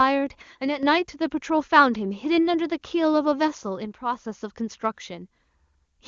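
From 0.42 to 0.83 s and again from 3.85 to 4.25 s, the level falls abruptly by about 6 dB, likely from one channel dropping out before the mono sum.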